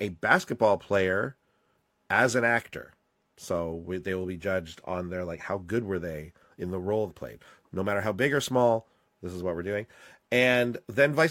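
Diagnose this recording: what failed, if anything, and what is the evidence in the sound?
The codec stage dropped compressed frames. Right after "they in the role", around 7.06 to 7.12 s, the speech jumps ahead by about two 46.4 ms frames, roughly a tenth of a second lost. Those frames were missing or refused by the decoder, so playback skips ahead by their length.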